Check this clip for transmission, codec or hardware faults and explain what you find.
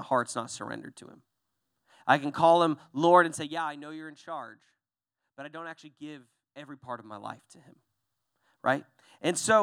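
One fault is present: zipper noise on a level drop in the speech. From 3.18 to 3.64 s, between "I can call him" and "I know you're in", a fast ticking, zipping texture rides on the sound as it falls by roughly 15 dB. The gain is lowered in unsmoothed 1 dB steps, around fifty each second, and every abrupt jump puts a tiny click into the waveform. Strung together, those clicks form the zip.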